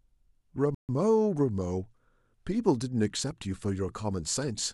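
At 0.75 s the speech drops to silence for about 142 ms, resuming at 0.89 s where it left off. This is likely a Bluetooth stall: radio interference delayed packets, the headphone buffer emptied, and playback paused until retransmitted data arrived.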